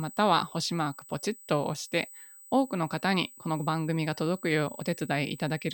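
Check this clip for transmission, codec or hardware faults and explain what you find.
One fault runs through the whole speech clip, USB whine. Throughout, a fixed 8 kHz tone, strongest at 16 kHz and roughly 20 dB below the speech, comes from USB microframe current leaking into the audio. Unlike mains hum, it is high-pitched, not low.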